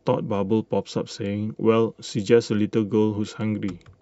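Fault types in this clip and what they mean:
Chunks out of order: around 2.07 to 2.11 s, one short block of about 23 ms got delivered a slot late, so it plays after the block that should have followed it. Nothing goes missing, but swapping two pieces leaves three hard joins in quick succession, so you hear a brief scrambled stutter in the speech.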